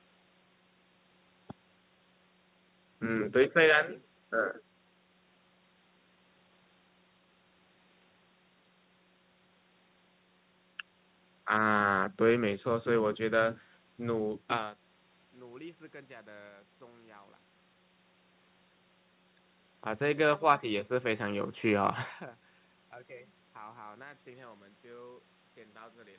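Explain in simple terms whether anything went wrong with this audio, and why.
Nothing went wrong here: the speech simply came through a phone-style call line, which is why it sounds a bit narrow with nothing above 4 kHz, and the gentle ups and downs in loudness are just ordinary fader-like level changes.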